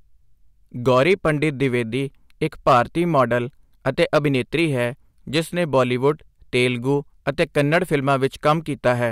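Hard clipping hits this speech six times. It first appears from 0.87 to 1.65 s, overdriven by about 3 dB. Then 2.67 to 2.80 s, at about 6 dB. Then 3.18 to 3.34 s, about 3 dB. Then 4.00 to 4.60 s, about 5 dB. Then 5.35 to 6.10 s, about 3 dB. Last, 7.29 to 8.91 s, about 4 dB. Each time, peaks exceed what a stage can pass and are sliced flat. The flat tops add high harmonics, heard as crackle on peaks.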